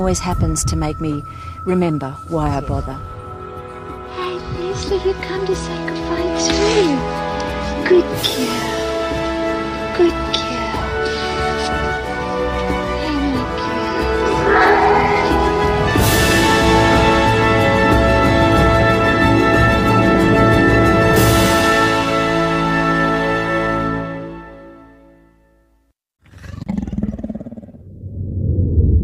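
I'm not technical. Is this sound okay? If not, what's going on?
Yes, it's fine; nothing wrong stands out anywhere.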